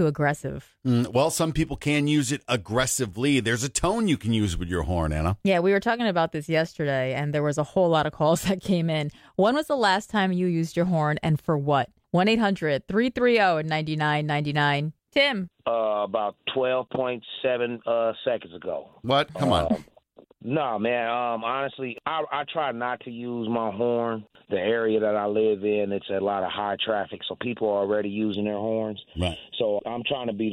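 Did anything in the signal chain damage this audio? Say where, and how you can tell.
Yes. From 28.34 s to 30.52 s, a stereo mixdown goes hollow: one channel lags about 0.4 ms, causing channel delay comb filtering with notches starting near 1.5 kHz.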